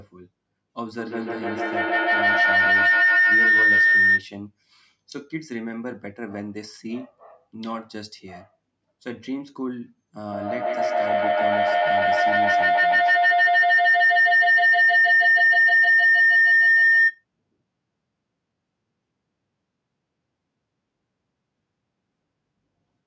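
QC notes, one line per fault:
0.98–4.33 s and 10.26–17.25 s, feedback howl: A tone near 2 kHz swells to about 14 dB above the speech, pulsing roughly every 150 ms. A microphone and loudspeaker on the same call are feeding each other. Each trip round the loop adds level instead of fading.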